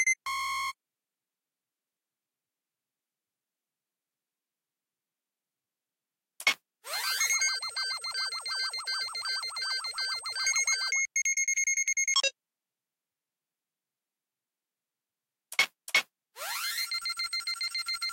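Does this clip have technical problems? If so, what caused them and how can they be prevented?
No, there are no technical problems to report here.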